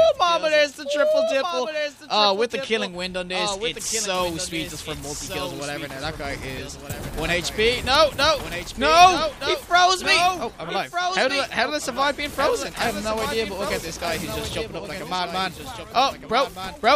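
From the start to the end of the clip, the audio carries a doubled audio track. A second copy of everything follows about one and a half seconds behind. It sits roughly 10 dB below the original. The copy is full-band and dry, with no decay or room colour, so it does not read as an echo. Each sound returns as a flat, quieter repeat. The likely cause is the same signal captured again through a slower path and mixed back in.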